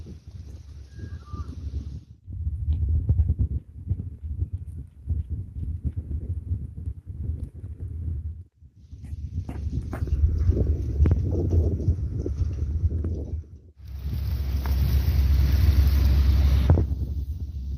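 No technical faults can be heard: the audio has come through a WebRTC call path, and its high frequencies stopping at around 12 kHz fit an Opus codec at roughly 40 kbps.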